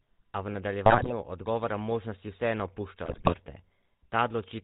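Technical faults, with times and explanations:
Throughout: GSM full-rate codec. A buzzy, gravelly roughness and nothing above 4 kHz, which fits the 13 kbps full-rate coder's pulse-driven excitation rather than simple band-limiting.
0.86–1.13 s and 3.06–3.34 s: GSM bit errors. Squawks and gargling just before "odgovora možnosti vseeno" and again after it. Corrupted frame parameters distort the spectrum and level, unlike clean dropouts.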